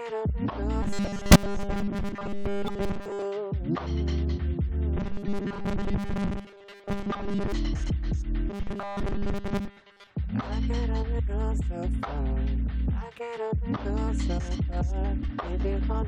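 New audio likely arrived too seldom from 0.83 to 3.25 s, so the player kept looping the last short buffer and skipped most of the real audio. These are robotic sounds from repeated short buffers, and the 5 ms repeats force a rigid 200 Hz metallic buzz that only loosely tracks the underlying sound. The same buzz returns from 4.97 to 7.52 s and from 8.50 to 10.11 s. Inside the first stretch, from 1.31 to 1.36 s, whole compressed frames went unplayed, either missing or rejected by the decoder as damaged, so the audio jumps ahead by around 50 ms.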